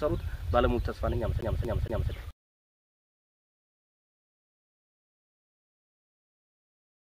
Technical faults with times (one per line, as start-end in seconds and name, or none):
1.41-2.11 CD stuck on one turn